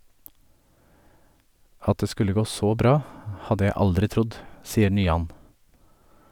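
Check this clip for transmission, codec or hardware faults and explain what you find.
Nothing in the speech here points to a transmission, codec or hardware fault.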